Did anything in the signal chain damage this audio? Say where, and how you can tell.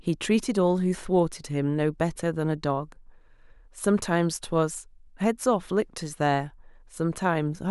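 Yes. From 1.45 s to 6.90 s there are about five faint clock slip clicks, roughly every 1.5 s, each a single-sample jump. The likely cause is two unsynchronised converter clocks about 15 ppm apart. Spectrograms show thin vertical broadband lines; waveforms show tiny steps.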